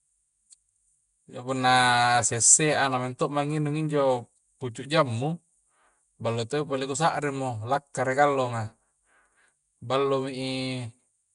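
From start to finish the speech carries a rough, hissy halo and a smeared, underwater quality, the kind of damage left by Nellymoser compression, most likely the Nellymoser Asao codec from Flash. Working on 256-sample blocks with a fixed small bit budget, it starves weak bands and fills them with noise, at a rate that sounds close to 44 kbps. A spectrogram shows grainy noise patches between harmonics, blocky time smearing, and nothing above 10.6 kHz.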